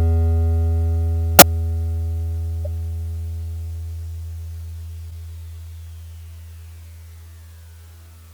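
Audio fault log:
1.39–1.42 s, 2.65 s and 5.10–5.12 s: corrupt frame decoded. Damaged bits in compressed frames went through the decoder unchecked, so misread gains and codes put energy at the wrong frequencies in the music for the length of each bad frame. The first sounds like one damaged frame and gives an error, the loudest of the three. The later two sound like two or three frames each and give fainter errors, around -30 and -35 dBFS.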